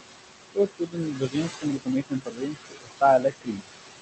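Throughout the clip, noise suppressor artifacts come from the suppressor pulling down every band it judges to be steady noise, frame by frame, by about 19 dB. The room noise, sitting only about 6 dB below the speech, is therefore dragged down in the gaps and let back up under the talking.

Because the noise sits so close to the speech level, the suppressor also mistakes parts of the speech itself for noise. This speech cut by the noise suppressor happens in four stretches: 0.55 to 0.98 s, 1.15 to 1.88 s, 2.09 to 3.02 s and 3.19 to 3.64 s. Within each stretch, pieces of speech adding up to somewhere between a fifth and half a second are turned down along with the background, by about 17 dB in the first stretch and about 20 to 21 dB in the later three. Consonants and word endings there sound swallowed or faint, and the top end of the call audio stops around 8 kHz.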